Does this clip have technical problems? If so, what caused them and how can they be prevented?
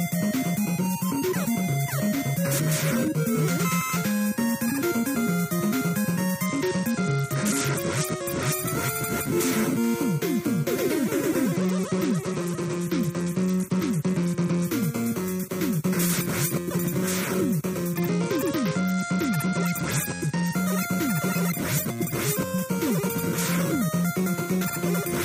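Yes. A Bluetooth SBC bit pool drop occurs three times: 6.46 to 8.52 s, 11.56 to 14.65 s and 17.93 to 20.53 s. In each, the treble dulls and a gritty grain rises, pointing to the link cutting the bit pool from about 28 to 9, near 78 kbps. Starved of bits, the top sub-bands go empty and the rest are coarsely quantised. A spectrogram shows the upper band abruptly blank in those spans, with speckled noise below. Keeping the phone close and clear of Wi-Fi congestion avoids the fallback.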